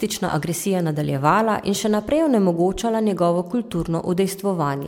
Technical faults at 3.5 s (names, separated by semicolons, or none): generation loss